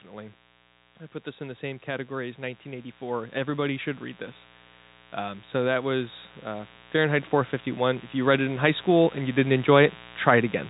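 A speech recording carried over a telephone-band channel, with nothing above 4 kHz, consistent with G.711 mu-law coding. A mains buzz runs through the entire clip, sitting roughly 20 dB below the speech. It is raspy rather than a pure hum because sharp switching spikes, from a dimmer, rectifier or poorly shielded connection, repeat twice per 60 Hz cycle and fill the band with harmonics of 60 Hz right up to the telephone cut-off. Automatic gain rising occurs twice. From 1.24 to 3.96 s, between "I put" and "read this", the gain climbs by 6 dB. From 5.16 to 9.65 s it climbs by 9 dB. In both cases the gain control judged the input too quiet and raised it slowly, so the speech and the buzz swell together over several seconds rather than jumping.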